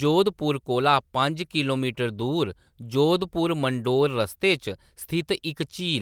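No technical faults can be heard anywhere in the speech recording.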